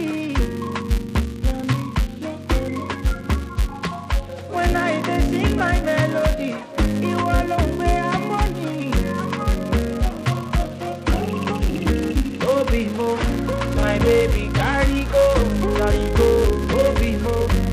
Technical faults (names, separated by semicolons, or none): filter restarted on every block